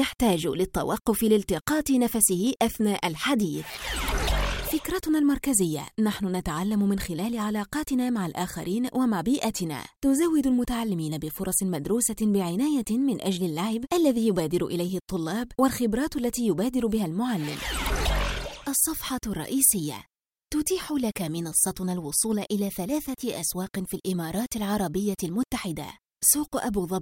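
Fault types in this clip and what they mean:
No faults can be heard anywhere in this audio.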